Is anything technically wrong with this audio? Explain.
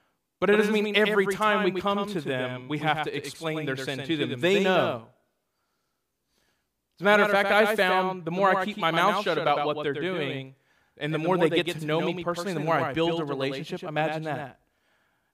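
Yes. Throughout the speech there is a doubled audio track: a second, full-band copy trails by roughly 100 ms, about 5 dB quieter, likely from a slower duplicate capture path, giving a dry slapback echo.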